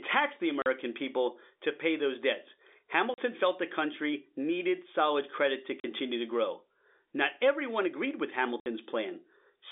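Packet loss filled with silence: packets went missing and the receiver played silence in their place, leaving hard-edged holes in the speech at 0.62 s after "tax the", 3.14 s, 5.80 s and 8.60 s. The first three last 40 ms and the last 60 ms, which fits 20 ms packets.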